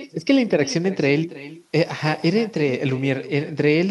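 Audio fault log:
throughout, echo with no canceller: the far end's loudspeaker leaks into its microphone and nothing removes it, so the speech returns about 17 dB quieter and thin, roughly 300 ms later.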